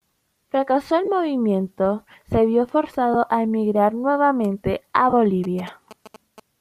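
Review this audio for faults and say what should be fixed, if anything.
Lost LE Audio frames at 1.05 to 1.08 s, just before "movimiento se vio", at 3.14 s between "movimiento se vio" and "a emigrar nuevamente a", and at 5.10 to 5.13 s right after "a emigrar nuevamente a". The gaps last 22.5 ms, 7.5 ms and 30 ms, fitting three, one and four 7.5 ms frames. The decoder fills each gap by repeating the last spectrum with scrambled phase, so the speech briefly smears into a noisy blur. A stronger radio link or retransmission would prevent these.

GSM signalling bursts from 5.44 to 6.40 s: a galloping pattern of short buzzes at about 217 Hz, sitting about 20 dB below the speech, as a nearby 2G phone's brief radio activity is rectified by the audio circuitry. Shielding the cables and keeping phones away from the equipment would prevent this.

The slight breathy graininess in the speech is likely from the Bluetooth LC3 compression.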